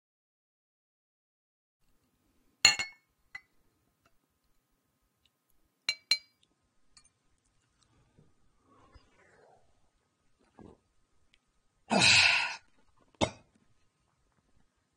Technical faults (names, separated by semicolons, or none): adaptive stream at a lower bitrate